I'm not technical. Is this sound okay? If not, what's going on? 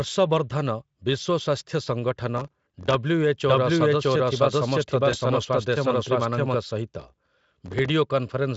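No, there are three separate problems in this speech clip.

From 2.37 to 2.94 s and again from 7.0 to 7.89 s there is processor overload crackle: the computer fell behind on dozens of very short audio chunks, about 1.5 ms each, and replayed scraps of older sound. Unlike a single click or dropout, it's a gritty tearing spread over most of a second, and it stops once the load eases.

From 3.47 to 6.55 s there is a doubled audio track. A second, equally loud copy of the speech runs about 0.7 s behind the first, most likely because the sound was recorded twice through a slower path. Unlike a room echo, it doesn't fade or sound roomy, and it starts and stops abruptly.

At 5.11 to 5.17 s there is VoIP packet loss concealed by the speech codec. One 20 ms piece of the call was lost in transit, and the decoder filled the hole by guessing from what came just before. It's heard as a brief stretched, smeared patch rather than silence, and the speech stays weak or distorted for a moment afterwards.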